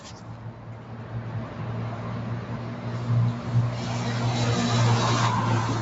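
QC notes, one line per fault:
throughout: noise suppressor applied to music or sounds. A suppressor built for speech was left running, and it keeps treating the steady parts of these sounds as noise. The sustained bits and the tails get pulled down while the onsets mostly punch through, so the level swings by about 5 dB and the whole thing pumps and thins out instead of holding steady. The top end stops at 8 kHz, which is just the call's bandwidth and not part of this problem.
1.00 to 2.56 s: doubled audio track. A second full-band copy of the sound runs about 300 ms behind the original and about 5 dB quieter. You hear it as a hard, dry repeat with no room tail, and it switches on and off abruptly at those two points. It's likely from the same audio being picked up again through a slower path, or from an edit that left two copies out of step.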